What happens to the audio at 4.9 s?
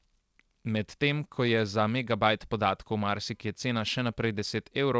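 Nothing goes wrong at 4.9 s: the speech there is intact, with only the band limit to about 8 kHz that the G.722 call path imposes throughout.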